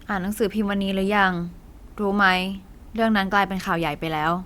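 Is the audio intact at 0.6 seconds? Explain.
Yes, the audio at 0.6 seconds is intact, with no fault present at that moment.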